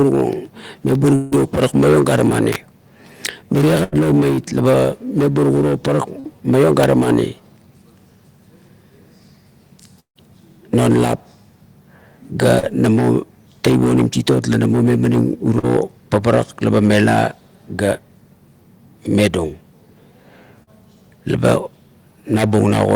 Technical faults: periodic USB or driver dropouts; long network dropout; electrical switching spike; burst of packet loss; short concealed packet loss

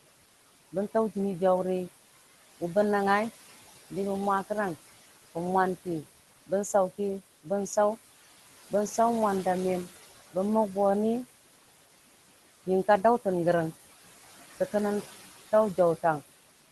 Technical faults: noise suppressor artifacts

